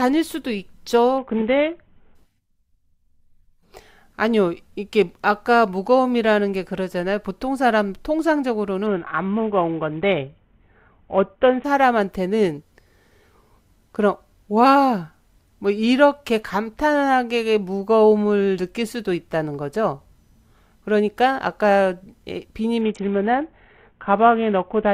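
At 1.18 to 2.15 s, 8.86 to 11.64 s and 22.81 s to the end, a Bluetooth SBC bit pool drop dulls the speech and adds grit, which fits a fall to roughly 54 kbps.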